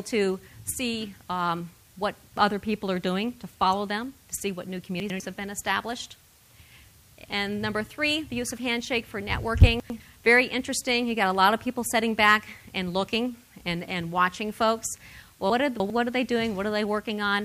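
At 5.0, 9.8 and 15.5 s, chunks out of order: a 100 ms block arrives late and plays after its successors, one chunk late in the first two and three chunks late at 15.5–15.9 s. Each produces a short jumbled stretch bounded by hard joins.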